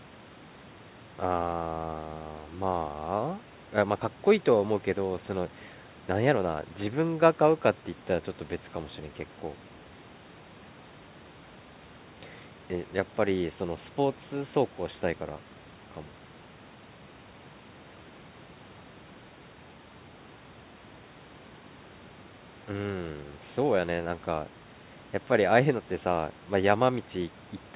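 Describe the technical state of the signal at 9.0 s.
At 9.0 s the speech signal is intact, with no fault present; the narrowband call path stops the highs at about 4 kHz.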